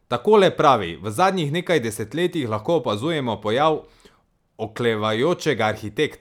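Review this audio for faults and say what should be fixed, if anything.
No faults are audible in the speech recording, so nothing needs fixing.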